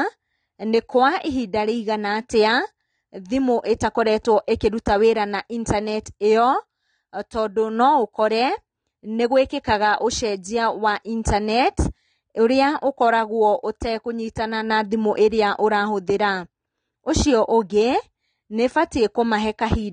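Speech, with AAC compression audible throughout: the sound is dull and smeared, with a fizzy, warbling edge on sibilants, likely from AAC-LC at a bitrate near 32 kbps. A spectrogram would show nothing above 9.7 kHz.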